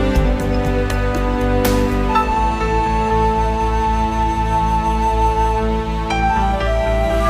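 Compressed frames skipped at 2.28 to 2.31 s: roughly one frame of the encoded audio never reaches the output, either because it is missing from the stream or because the decoder rejected it as corrupt. Playback jumps ahead by about 50 ms, which fits a frame length of about 46 ms, and a sliver of the sound is simply gone.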